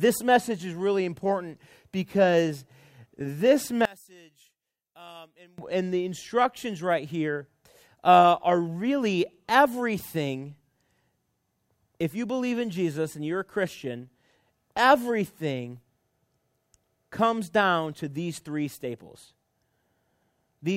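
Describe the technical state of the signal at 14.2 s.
At 14.2 s the speech signal is intact, with no dropout, clipping, glitch or other fault to be heard at that moment.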